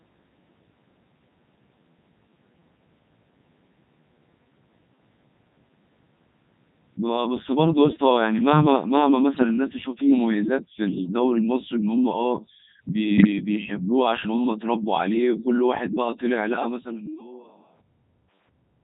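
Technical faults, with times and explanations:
Throughout: Codec 2 vocoder at 3.2 kbit/s. Only pitch, voicing, energy and spectral envelope survive, so the speech is rebuilt from sine waves and sounds robotic and buzzy.
9.35 to 9.44 s and 13.18 to 13.27 s: bit errors on digital voice radio. Corrupted frame parameters, roughly 7% then 4% of bits flipped, make the voice jump in pitch and level and warble briefly.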